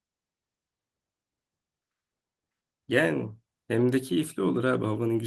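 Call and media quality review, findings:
Nothing stood out on listening to the speech in this clip.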